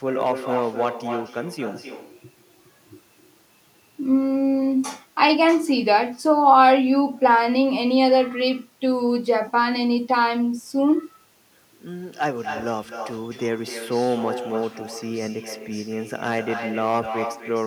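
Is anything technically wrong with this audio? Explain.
Yes, there are two faults. Throughout the speech there is an echo with no canceller. Every phrase returns roughly a third of a second later, only about 7 dB quieter, as a thinner copy. The far end's loudspeaker feeds its microphone, and nothing subtracts that signal before it travels back. Room reverberation smears into a continuous tail, but this is a distinct, delayed repeat of the whole phrase.

There is also hard clipping at 0.21 to 0.89 s (overdriven by about 5 dB), 13.94 to 14.29 s (about 2 dB), 16.15 to 16.39 s (about 5 dB) and 16.78 to 17.0 s (about 6 dB). At these moments the level exceeds what a stage can pass, so the peaks are sliced flat and spray high harmonics. The result is a harsh crackle on the loudest syllables, mildest around 14 s. A limiter would turn the peaks down smoothly instead, and codec distortion would not be confined to the peaks like this.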